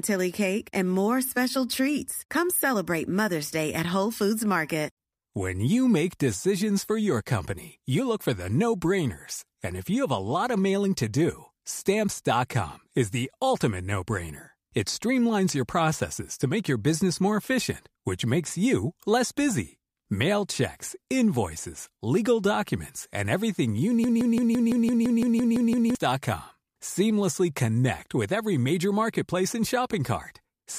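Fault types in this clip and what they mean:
Broken-record loop: likely a stalled player or stream resending its last buffer; after "documents and everything you" a 0.17 s fragment repeats 11 times, 24.04–25.95 s, replacing the following speech.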